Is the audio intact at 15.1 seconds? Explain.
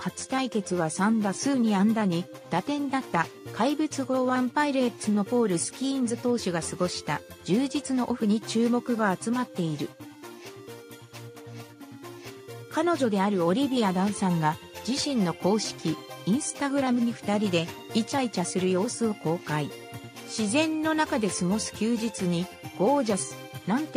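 Yes, the audio at 15.1 seconds plays through cleanly, with no dropout, click, distortion or other fault at that point.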